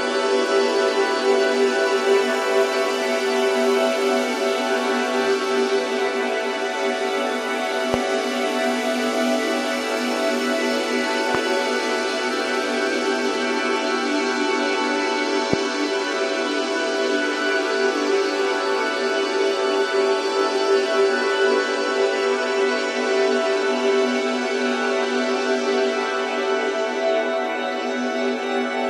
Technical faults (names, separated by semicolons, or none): loud pop